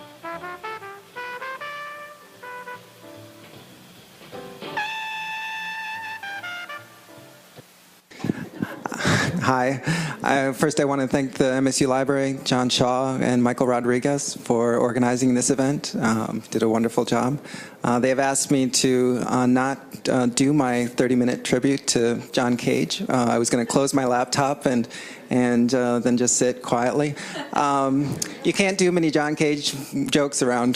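No technical faults can be heard anywhere in the recording; the signal stays intact and continuous throughout.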